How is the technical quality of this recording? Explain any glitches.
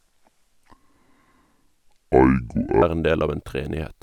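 The recording has one clear glitch. From the start to 2.82 s, just before "er en del av", there is a section at the wrong speed. It plays at about two-thirds of the correct rate, 0.667 times. Pitch and tempo drop together. The speech sounds deep, slow and dragged, roughly seven semitones low. At 2.82 s it snaps back to normal pace and pitch. The likely cause is playback or editing against the wrong clock.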